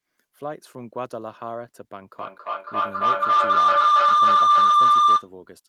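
Feedback howl runs from 2.13 s to 5.33 s. A microphone and loudspeaker in the same room are joined on the call, and each trip around that loop returns the sound louder than before, so the repeats swell instead of dying away. They narrow onto a tone around 1 kHz, repeating roughly every third of a second, the loop's delay, and climb to about 17 dB above the speech before the howl stops.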